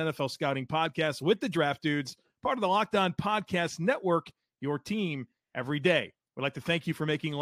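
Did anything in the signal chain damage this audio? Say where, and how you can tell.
No, nothing along the chain seems to have harmed this one, so there's no stage to point at and no damage to trace.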